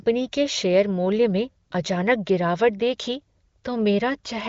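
Nothing goes wrong anywhere in this bit of speech; it runs over the AMR wideband (HD Voice) codec at 18.25 kbit/s, with nothing above about 7.6 kHz and at most faint coding traces, and no fault turns up along the way.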